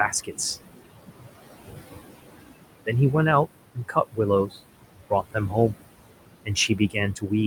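A speech recording runs throughout with noise suppressor artifacts. The suppressor pulls the background down by about 19 dB wherever it judges a band to hold only steady noise. The room noise, sitting only about 11 dB below the speech, sinks in the gaps and swells back under each phrase. The same process also produces speech cut by the noise suppressor. At 0.11–0.33 s, 3.75–4.19 s, 4.46–4.57 s, 4.93–5.55 s, 6.45–6.96 s and 7.14–7.32 s, it mistakes quieter parts of the speech for noise and turns them down with the background. The deepest drops are about 21 dB, at 3.75 s and 4.93 s. The affected stretches within each span are short, roughly a tenth to a fifth of a second. They come out swallowed or faint rather than fully missing.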